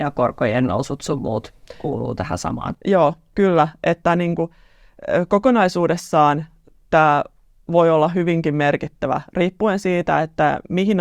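Nothing stood out on listening to this speech recording.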